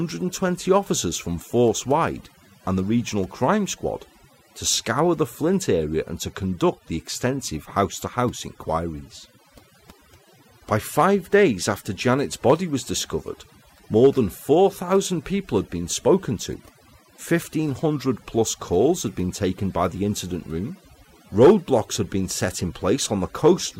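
From start to finish the background sits near silence, speckled with twinkling chirps. This is overdone noise removal: a noise reducer set too strongly kept pulling individual frequency bands down whenever they resembled noise, taking quieter voice detail along with them.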